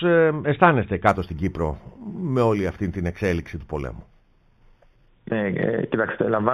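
From 1.09 to 5.08 s the audio shows imaging from linear upsampling: the sample rate was raised by joining the original samples with straight lines, and the sound points to material at 8 kHz being brought up to 44.1 kHz. Straight-line interpolation filters poorly, so the top of the original band is dulled and a mirrored copy of the spectrum remains above it, the first one spanning about 4 to 8 kHz at roughly 30 dB below the signal. It comes through as a light metallic shimmer on the high-frequency content.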